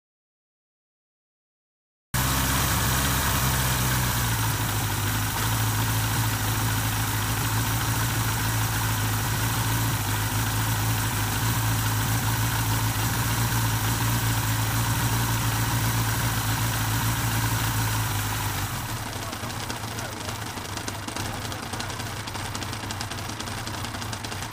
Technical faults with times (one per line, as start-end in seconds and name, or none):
0.00-2.14 audio dropout to silence